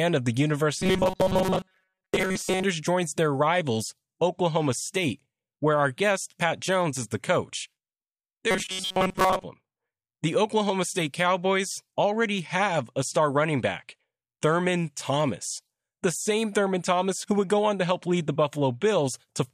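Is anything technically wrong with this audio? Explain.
Yes. Robotic sound from repeated short buffers occurs from 0.79 to 2.64 s, between "of the" and "joins their rivals", and again from 8.51 to 9.43 s. The likely cause is new audio arriving too rarely, so playback fills the gaps by looping a tiny slice, roughly 5.3 ms, while most of the real signal is skipped. That loop imposes a fixed 188 Hz pitch, turning the speech into a rigid metallic buzz that only loosely tracks the words.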